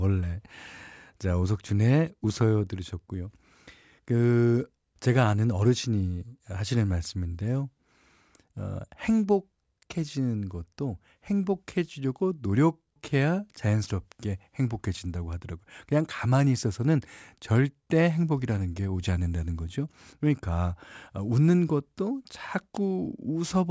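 Throughout the recording, the audio was brought down to a lower sample rate without an anti-aliasing filter, and the fold point at 8 kHz fits a drop from 48 kHz to 16 kHz. This is aliasing: content above 8 kHz was not removed but mirrored back below it, landing at unrelated frequencies roughly 30 dB under the speech. Sibilants come out gritty and metallic, and the spectrum stays full right up to the 8 kHz edge.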